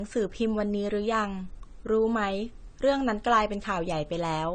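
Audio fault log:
throughout, low-bitrate audio saved at a high bitrate: the speech is dull and keeps the artefacts of its first encoding, with nothing above 9 kHz, which fits a file likely squeezed through a low-bitrate codec first and then re-saved as a roomy MP3 that can't bring back what was lost.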